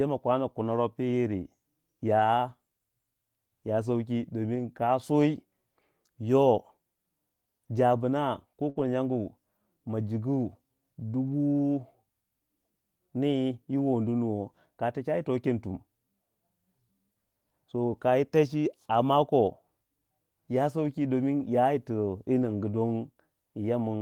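Speech with two kinds of network fault. A lost packet rebuilt from error correction makes brief rough, noisy patches at 2.19–2.21, 4.55–4.61, 8.77–8.79, 11.27–11.34, 21.40–21.45 and 22.42–22.52 s. The decoder played low-bitrate backup copies, so nothing drops out. A burst of packet loss follows "jabna ko" at 8.69–8.77 s. The receiver stretches the last sound into a fading fill of about 60 ms, then resumes with roughly 60 ms skipped.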